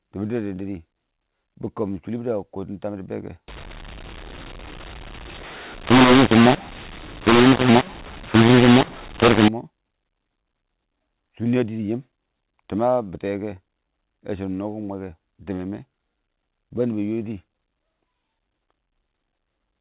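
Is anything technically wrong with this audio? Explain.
Yes. From 3.48 to 9.48 s, mu-law and A-law are mixed up: A-law G.711 telephone speech is decoded as mu-law, scrambling levels into harsh distortion and filling pauses with noise.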